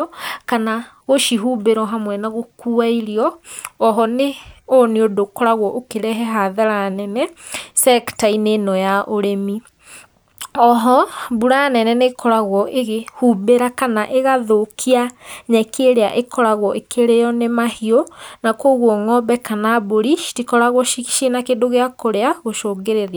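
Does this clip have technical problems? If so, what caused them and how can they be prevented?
No, nothing in this speech recording points to a technical fault, so there's no cause to trace and nothing to prevent.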